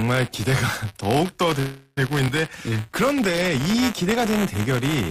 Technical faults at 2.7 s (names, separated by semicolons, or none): buffer tearing; jitter buffer slow-down